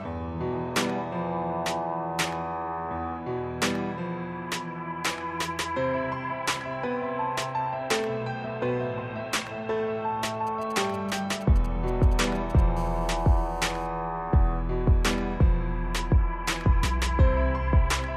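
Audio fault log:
10.47–12.61 s, GSM signalling bursts: a galloping dit-dit-dit of short 217 Hz buzzes, well below the sound. A nearby 2G phone's radio bursts are rectified by the audio circuit.
12.77–13.87 s, GSM phone buzz: a hard, raspy 217 Hz buzz with many harmonics, about 29 dB below the signal. A phone in a call transmits in bursts 217 times a second, and the circuit rectifies each pulse.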